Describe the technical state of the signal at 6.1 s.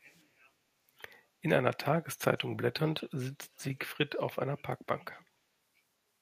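At 6.1 s the signal is intact, with no audible technical fault at that moment.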